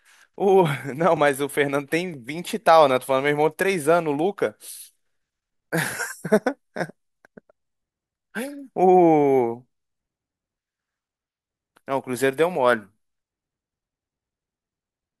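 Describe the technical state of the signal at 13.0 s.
At 13.0 s the speech signal is intact, with no dropout, clipping, glitch or other technical fault to be heard.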